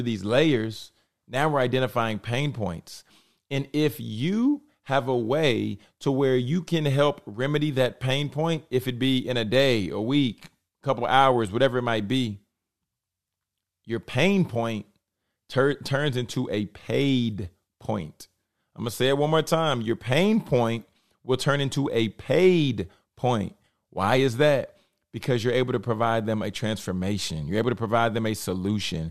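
Nothing stood out as a technical fault anywhere in the speech on listening.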